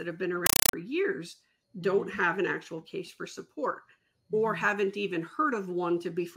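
From 0.46 to 0.73 s, a compressed stream is played as audio: an AC-3 (Dolby Digital) bitstream reaches the output undecoded and is treated as ordinary samples. Each coded frame becomes a 5.33 ms burst of noise followed by silent padding, repeating 31.25 times a second, a pattern that fits a 256 kbps stream. The result is a very loud, harsh chattering static that replaces the sound for that stretch.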